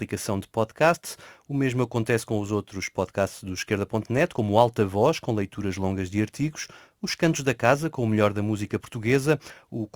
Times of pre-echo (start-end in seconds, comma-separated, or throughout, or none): none